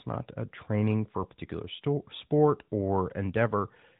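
No technical faults can be heard in this speech.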